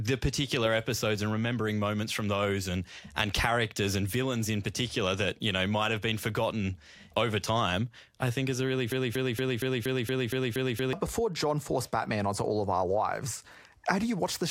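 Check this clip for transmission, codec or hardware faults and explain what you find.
One fault is present in the speech. Broken-record loop, 8.92 to 10.93 s: after "think is a really", a 0.23 s fragment repeats nine times back to back, likely from a stalled player or stream resending its last buffered piece. The two seconds of speech it replaces are lost, heard as a rapid mechanical stutter.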